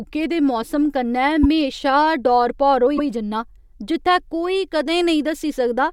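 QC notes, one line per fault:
1.43–1.46 s, repeated frames: a brief stutter as a 26.1 ms slice plays twice, which fits one compressed frame being written again.
2.97–3.07 s, repeated frames: just after "डौर भौर होई", a 104.5 ms stretch plays a second time. This fits about four frames being duplicated and lengthens the audio by that amount.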